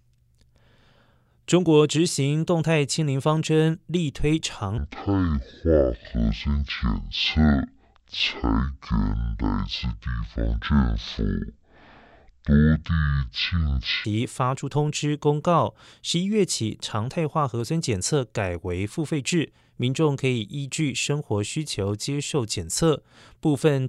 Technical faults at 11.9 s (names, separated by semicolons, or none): section at the wrong speed